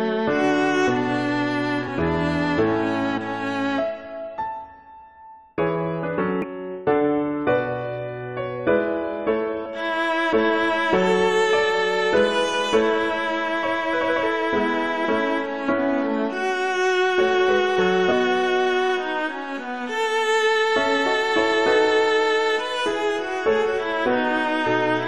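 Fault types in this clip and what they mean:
Damaged data in a compressed stream: corrupted bytes make the decoder misread frames and lose sync. Five brief blips result, each lasting about 14 to 22 ms.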